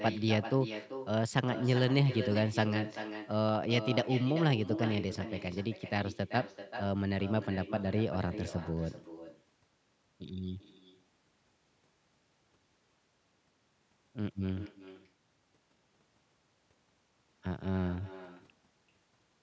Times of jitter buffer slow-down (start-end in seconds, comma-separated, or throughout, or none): none